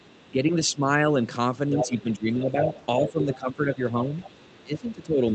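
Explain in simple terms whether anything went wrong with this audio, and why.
Two things go wrong here. The first is the other side's voice leaking through: a faint second voice is audible from 0.0 to 0.31 s, then much more clearly from 1.76 to 4.92 s. The likely cause is the talker's loudspeaker being picked up by the microphone, with the echo canceller failing to remove all of it.

The second is speech suppressed in double talk: the main voice dips from 0.31 to 1.17 s, 1.68 to 2.7 s, 3.04 to 4.07 s, and most deeply from 4.64 s to the end. This likely happens because, with both sides talking at once, the echo canceller lowers everything rather than just the echo.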